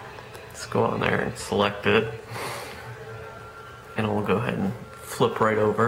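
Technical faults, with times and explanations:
No technical faults are present.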